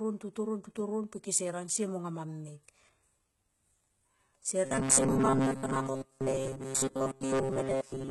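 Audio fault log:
Throughout: HE-AAC compression likely, with heavy codec damage and nothing above 11.8 kHz, fitting about 16 kbps; treble is rebuilt from lower bands, so sibilants sound gritty.
4.65–8.11 s: robotic sound from repeated short buffers, likely; repeats of roughly 7.5 ms replace most of the audio, imposing a rigid 134 Hz buzz over the speech.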